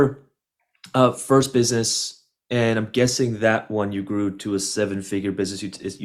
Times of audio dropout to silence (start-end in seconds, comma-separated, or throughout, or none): none